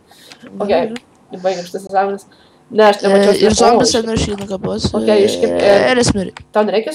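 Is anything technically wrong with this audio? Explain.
Yes. From 1.87 to 1.895 s there is a Bluetooth dropout: the sound cuts out abruptly and returns about 20 ms further on, which fits a single missed wireless packet as the likely cause. Unlike a stall, the audio resumes as though it had played on.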